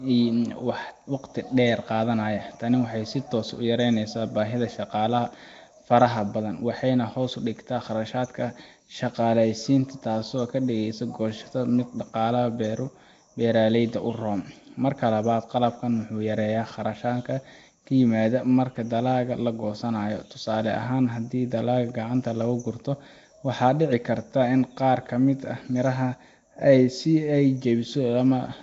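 Throughout the speech, a rough, hissy halo surrounds the sound, with a smeared, underwater quality and nothing above 7.7 kHz. This is likely Nellymoser compression: fixed-rate block coding starves weak bands of bits and fills them with noise, which fits a rate near 32 kbps.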